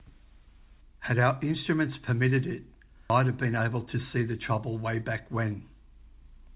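At 3.10 s a skip ahead drops about half a second of speech with no fill, so the waveform splices abruptly and the spectrogram shows a hard vertical seam. From 3.20 to 5.44 s a jitter buffer speed-up trims pitch-period slices to shed around 150 ms, running speech 107% fast at unchanged pitch. Syllables look compressed, their harmonics stay level, and the spectrogram stays empty above 4 kHz throughout.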